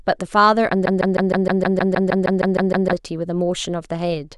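From 0.86 to 2.93 s the speech locks into a broken-record loop: one 0.16 s fragment repeats 13 times, identically, likely from a stalled player. Unlike a dropout, nothing goes silent; the missing speech is replaced.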